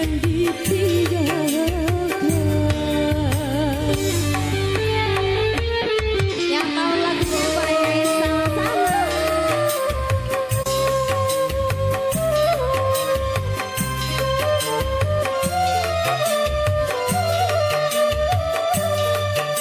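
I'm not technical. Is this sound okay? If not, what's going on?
Yes, it sounds fine; nothing here needs fixing.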